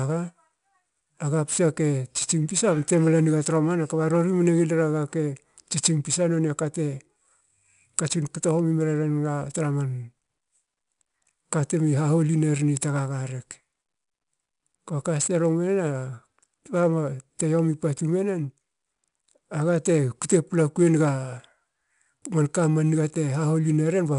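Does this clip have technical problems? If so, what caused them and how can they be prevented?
Yes. 4-bit ADPCM compression runs through the whole speech clip. Each sample is coded as a coarse 4-bit step from a prediction, leaving gritty hiss that rises and falls with the voice, roughed-up attacks, and nothing above 10.6 kHz, which fits a low sample rate near 89 kbps. Unlike steady background noise, this hiss disappears in pauses, and unlike MP3 artefacts it has no swirling or warbling. Prevent it by recording or exporting to uncompressed PCM or a modern codec at a full sample rate.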